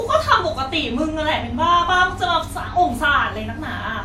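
Throughout the speech, the sound has a swirly, smeared and hollow character, with consonant onsets blurred and nothing above 19.7 kHz. This is generation loss, most likely from the audio passing through a lossy codec around four times. The artefacts point to WMA at roughly 96 kbit/s. Each re-encode quantises on a shifted frame grid, so noise piles up beyond what that bitrate alone would leave.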